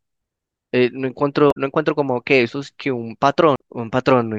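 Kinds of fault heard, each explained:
Damaged data in a compressed stream: Part of the coded speech data arrived wrong. Bytes may have been lost, zeroed or overwritten. The decoder cannot read those frames correctly. It loses its place and hunts for the next valid frame header. Here the fault runs from about 1.48 to 1.57 s, close to a tenth of a second. The speech gives way to a short garbled blip before normal decoding resumes.
CD skip: The laser was knocked or hit a flaw on the disc. It jumped to a different turn of the spiral track. The player mutes briefly, then carries on from a new point on the disc. In this clip it happens at 3.56 s. The mute is very short, only a few milliseconds. It is heard as a small tick, with the speech continuing abruptly from elsewhere rather than flowing on.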